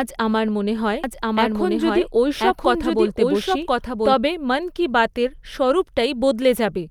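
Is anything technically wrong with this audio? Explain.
Yes. From 1.04 s to 4.14 s the speech is heard twice, a second equally loud copy trailing about a second behind, dry and full-band, appearing and vanishing abruptly. This is a doubled audio track, likely from a second, slower capture path mixing in.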